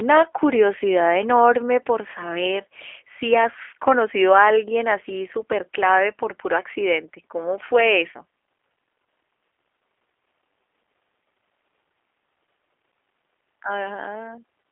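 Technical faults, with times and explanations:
Throughout, G.729 codec: the speech sounds slightly rough and synthetic, rebuilt from a vocal tract filter, pitch predictor and a few pulses per frame, which fits a low 8 kbit/s stream. The damage is plainly audible, with nothing above 3.5 kHz.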